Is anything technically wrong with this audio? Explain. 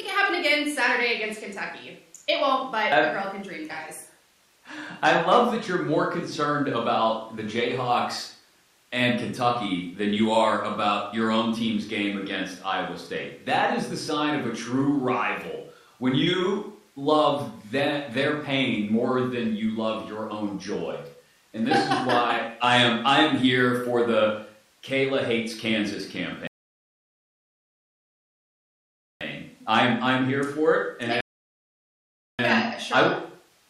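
Yes. Two rebuffering stalls occur, at 26.47 to 29.21 s and 31.21 to 32.39 s. The player ran out of downloaded audio and waited. The speech drops to silence for about 2.7 s, then 1.2 s, and resumes exactly where it stopped.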